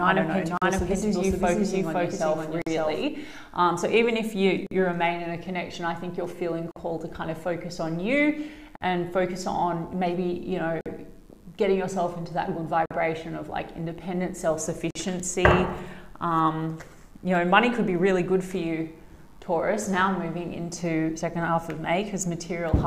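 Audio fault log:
0.00–3.03 s: doubled audio track. A second full-band copy of the sound runs about half a second behind the first, at roughly the same level. It is already present when the clip begins and stops abruptly at 3.03 s. The late copy has no decay or room colour, so it is a clean repeat, not an echo. The likely cause is the same signal reaching the mix twice, once through a slower path.
0.57, 2.62, 4.67, 6.71, 8.76, 10.81, 12.86 and 14.91 s: gap at a join of encoded pieces. Continuous sound breaks off in a gap of 43 ms at the first point and 48 ms at the others. Each gap has smeared edges, and the sound resumes where it left off. The steady spacing points to pieces about 2 s long, each encoded separately and butted together. Every encoder run leaves its start-up delay and end padding in place.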